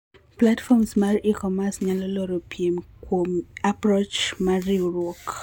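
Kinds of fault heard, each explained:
No technical faults are audible in the speech.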